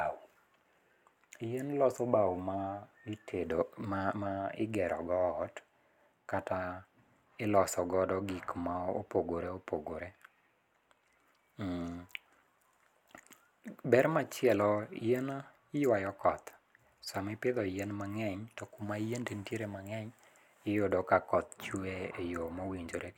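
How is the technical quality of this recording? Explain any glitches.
The technical quality of the recording is sound, with no glitches to explain.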